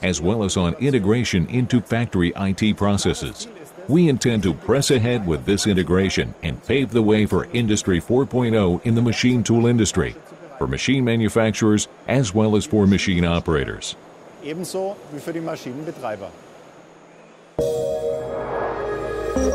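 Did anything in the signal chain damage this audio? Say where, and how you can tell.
Yes. A call bitrate drop at the codec stage, driven by the network's bandwidth estimate, hits from 4.18 s to 9.49 s. The encoder falls from 96 kbps to 20 kbps and stays at the bottom for about 5.2 s, so the audio turns muffled and watery before snapping back. On a spectrogram the upper band vanishes abruptly at 4.18 s and returns at 9.49 s, with smeared, blocky texture below the cutoff. The waveform envelope barely changes.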